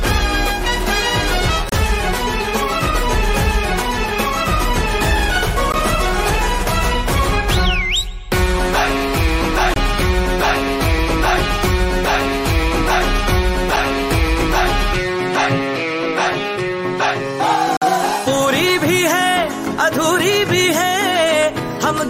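Five brief dropouts to dead silence cut into the sound, each with abrupt edges, at 1.69–1.72 s, 5.72 s, 9.74–9.76 s, 13.76 s and 17.77–17.82 s. They range from about 6 ms to nearly 50 ms, and they recur almost exactly every 4 seconds. This is a gap between stream segments. The timestamps of consecutive 4-second segments don't quite meet, so the player pads each join with silence. Nothing is missing from the sound; the holes are extra time inserted at each boundary.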